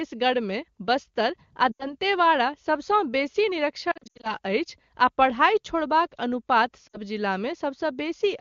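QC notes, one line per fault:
1.71–1.92 s, 3.91–4.34 s, 6.88–6.98 s, lost AMR speech frames: the decoder covers 80, 220 and 60 ms of gaps by repeating the last good pitch and vocal-tract settings at falling gain, so sound briefly smears and dips. The middle stretch, after "सबसँ बेसी", has scattered losses with runs up to 80 ms, so it repeatedly dips or warbles.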